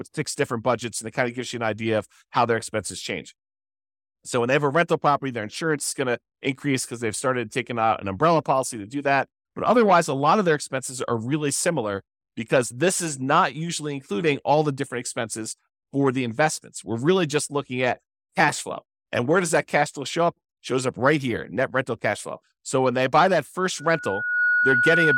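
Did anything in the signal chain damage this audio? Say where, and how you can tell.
Yes. From 23.78 s to the end of the clip at 25.17 s, a steady 1.5 kHz tone rises out of the speech, swelling over about 0.7 s into a squeal that finishes roughly 5 dB louder than the talker. This is loudspeaker feedback squeal at the analogue capture stage: the microphone was picking up a loudspeaker it was feeding, and at 1.5 kHz the loop gain passed unity, so that frequency kept building on itself.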